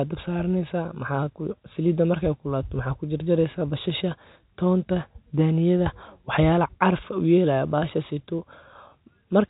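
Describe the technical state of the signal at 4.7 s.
At 4.7 s the speech is intact, passing through G.711 telephone coding as expected, with nothing above about 3.8 kHz and no fault present at that moment.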